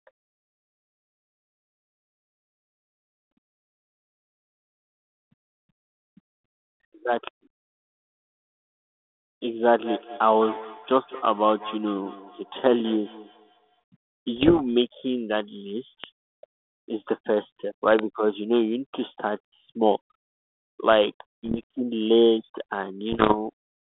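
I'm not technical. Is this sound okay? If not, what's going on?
No, there are three kinds of problem in this speech recording.

From 9.62 to 13.84 s there is feedback echo between two devices. Two phones or computers in the same room were likely on the same call. One played the other's sound aloud, and that microphone picked it up again. Each phrase comes back about a fifth of a second later as a fainter, thinner, slightly ringing copy. The echo is quiet.

At 14.36 to 14.61 s, 21.44 to 21.63 s and 23.12 to 23.35 s there are bit errors on an ADPCM link, the kind of digital connection a cordless phone uses. A few bits arrived corrupted, and the decoder takes a moment to recover from each one. Each burst sounds like a quarter of a second or less of crackly, rough pops with brief jumps in loudness. The last burst, near the end, is the roughest.

At 16.04 s and again at 17.99 s there is a loud pop. 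Each is a single sharp click, much louder than the speech, while the talking carries on underneath. The likely cause is an electrical jolt, such as a plug or cable being knocked, a switch, static, or a brief glitch in the audio hardware. The second pop is the louder of the two.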